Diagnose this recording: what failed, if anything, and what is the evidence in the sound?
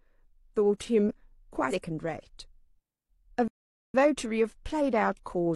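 At the codec stage, compressed frames were skipped: around four consecutive frames never reached the output, either missing or rejected as damaged. Near 1.68–1.73 s the speech jumps ahead by roughly 200 ms, which fits frames of about 46.4 ms.

The playback stage stalled, likely because the buffer ran dry or the player's thread was blocked. From 3.48 s to 3.94 s the output drops to silence for about 0.46 s, cutting the speech off mid-flow before it resumes.

After the stall, the player ran a time-compressed catch-up to clear its backlog, removing small slices of audio and cross-fading across the gaps. From 3.94 s to the end the speech plays about 1.1 times faster at unchanged pitch, sounding hurried.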